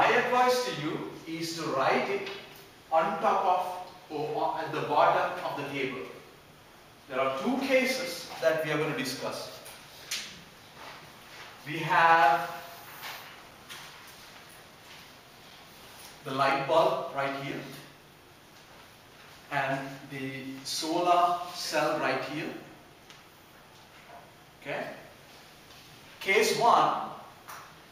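Periodic USB or driver dropouts from 13.51 to 18.52 s: once a second, a few milliseconds of sound vanish into silence, heard as regular ticks.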